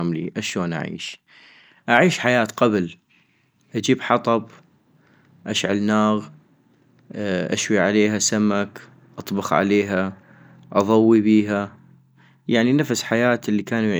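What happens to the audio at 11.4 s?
Nothing goes wrong at 11.4 s; the speech carries on intact through that moment with no dropout, click or distortion.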